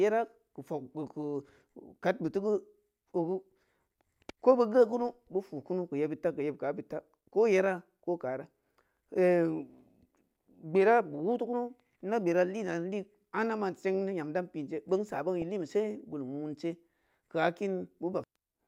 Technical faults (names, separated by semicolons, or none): DAB burbling